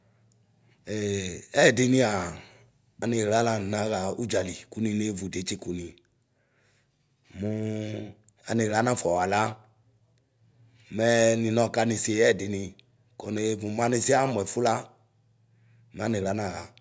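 No technical faults can be heard anywhere in the speech recording.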